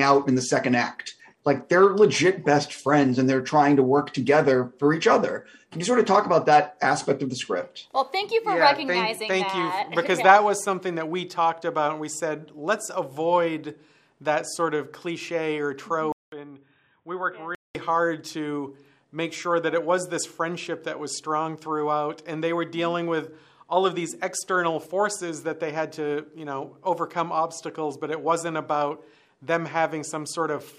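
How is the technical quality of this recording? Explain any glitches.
There's one clear glitch, between 16.12 and 17.75 s. The audio cuts out for about 200 ms, then comes back duller, boxier and noticeably quieter, roughly 10 dB down, with nothing above about 3.8 kHz and a new background noise sitting around 40 dB under the signal. That pattern points to an input switched to a poorer device, most likely the recorder jumping to another mic or a headset's call profile with a narrower band and its own noise floor.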